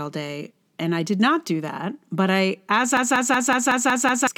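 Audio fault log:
2.97–4.27 s, system hang loop: the speech suddenly stops moving forward and one 186 ms slice just repeats, seven times over, at about 5.4 times a second, which gives it that machine-gun stutter. That's the machine or driver freezing while the sound hardware keeps cycling the same ring buffer; the loop length fits an 8192-sample buffer. Whatever should have come next, roughly a second and a half of it, is simply gone.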